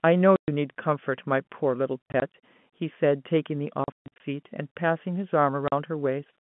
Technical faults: packet loss filled with silence

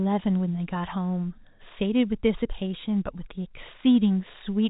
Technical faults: none

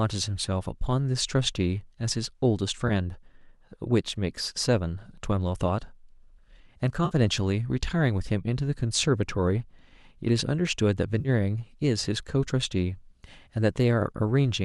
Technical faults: AAC frame loss with concealment

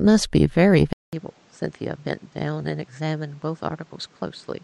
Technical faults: input switched to a poorer device

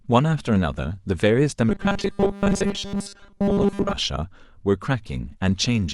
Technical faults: robotic sound from repeated short buffers

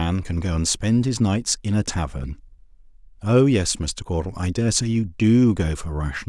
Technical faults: none

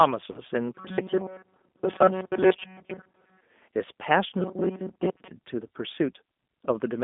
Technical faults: G.729 codec; VoIP packet loss concealed by the speech codec

